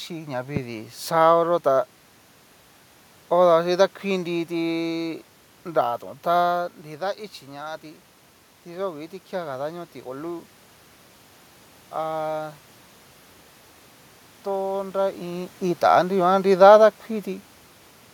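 Speech recording with two technical faults. A loud pop from 0.56 to 0.59 s, just before "xaoyó tá", peaks roughly 10 dB above the speech, likely from a voltage step such as a plug, switch or static discharge. Automatic gain rising runs from 7.45 to 12.62 s: after the talker moves away around 6.5 s and the input falls about 10 dB, the gain control slowly adds about 4 dB, so speech and room noise swell together.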